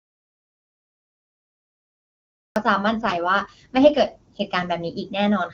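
From the very start until 2.56 s the speech is absent, pure silence with no room tone, most likely an audio dropout to silence from lost input. Between 3.02 and 4.40 s the voice turns rough and synthetic without losing bandwidth, which fits an AMR rate drop from 23.85 to 8.85 kbit/s.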